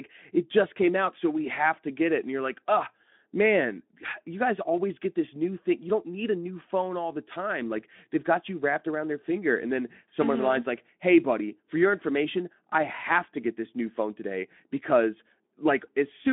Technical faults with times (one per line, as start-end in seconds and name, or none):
none